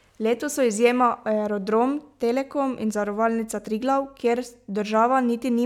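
No technical faults can be heard anywhere in the speech; the signal stays steady and intact throughout.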